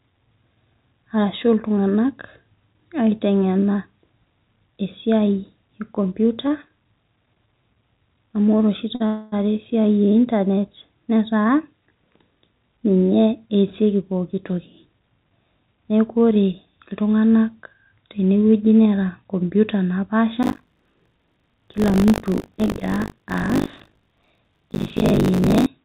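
Between 6.48 and 7.48 s, a handful of brief ticks and small smears break into the speech, each no longer than about 20 ms. These are scattered short gaps: a few packets were lost or late, and the receiver covered each small hole by carrying the previous sound forward. Together they add about 14 ms.

At 8.95 s, a sound is held for 48 ms with a slight buzzy sustain before the speech resumes from where it paused. This is a short stall from a late packet. The jitter buffer emptied, and the receiver stretched the last sound until the packet arrived, so nothing is lost.

From 9.06 to 9.34 s, the audio hangs again for 260 ms as a fading buzz that never drops to silence, then carries on exactly where it stopped. This is a call audio freeze, likely caused by packets held up in transit that left the jitter buffer empty.

From 13.19 to 16.80 s, the speech sounds hurried, running at 108% of normal speed while its pitch stays the same. 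This is a jitter buffer speed-up. The buffer had built up too much delay, so the receiver trimmed many tiny pitch-period slices, about 0.3 s in total, to catch up.

From 20.42 to 25.67 s, a robotic rattle at 50 Hz sits on the speech and is heard only while sound is present. This is buffer tearing. The writer and the hardware reader of the ring buffer have slipped, so roughly a third of each period replays audio about 70 ms old, with hard joins that fit a 20 ms period. The call path itself has no content above 4 kHz, which fits a narrowband codec such as G.711.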